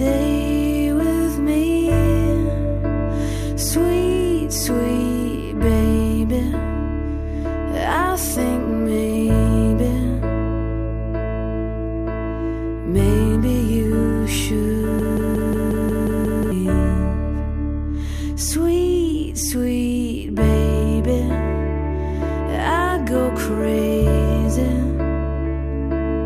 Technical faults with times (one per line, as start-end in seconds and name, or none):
14.99-16.52 broken-record loop